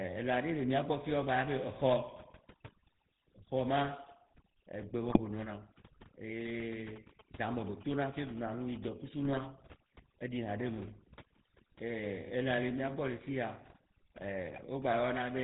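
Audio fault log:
throughout: overdone noise removal. The noise reduction was pushed too hard, so frequency bands near the noise floor are cut to almost nothing. Quiet parts of the speech are cut with them. Between phrases the background drops to near silence, with twinkling specks where stray bands flicker back on.
throughout: GSM full-rate codec. The speech passes through the original GSM codec, whose 13 kbps rate fits full rate. It models the vocal tract and drives that model with a coarse, regularly spaced pulse train, keeping only every third excitation sample. Nothing above 4 kHz survives, so the sound is band-limited and dull. The coding damage is plainly audible as a buzzy, gravelly roughness on the voice.
5.08–5.19 s, 9.25–9.41 s, 14.51–14.65 s: GSM bit errors. Three short bursts of corruption reach the decoder, each lasting roughly a tenth to a sixth of a second. Flipped bits scramble the filter, pitch or gain values for a few frames at a time. 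The spectrum bends suddenly or the level jumps. Each burst breaks the speech into brief squawks, pops and gargling before normal decoding resumes.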